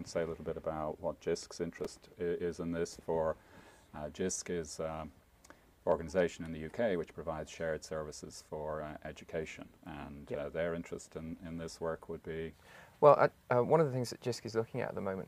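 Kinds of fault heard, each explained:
Processor overload crackle: the processing could not finish each short audio buffer before its deadline, and the misses repeat from 1.80 to 2.13 s. Each missed buffer is filled with a replay of old audio, so hard-edged fragments are spliced into the stream. The tick spacing points to buffers of around 3 ms and something like seven misses. Together they form a burst of gritty crackle over the sound that stops once the load passes.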